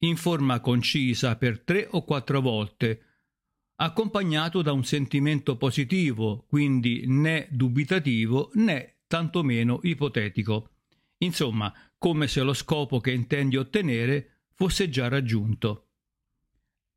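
There are no technical faults to describe.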